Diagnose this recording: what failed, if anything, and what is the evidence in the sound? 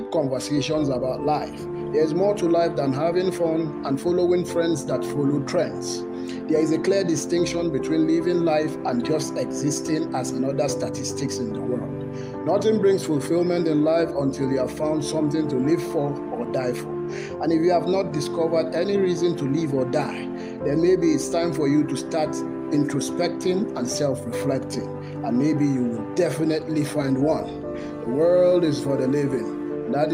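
No faults detected anywhere.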